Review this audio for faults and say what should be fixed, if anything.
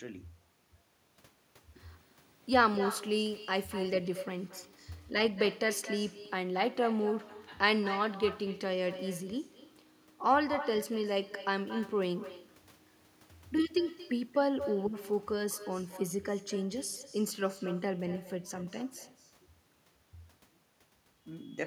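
There's echo with no canceller running right through the speech: every phrase comes back about a fifth of a second later, roughly 14 dB down and thinner, because the far end's loudspeaker feeds its microphone. Enabling acoustic echo cancellation there, or using a headset, would stop it.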